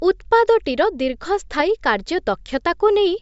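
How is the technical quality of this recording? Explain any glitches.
The recording has no glitches. There is nothing in the audio that calls for an explanation.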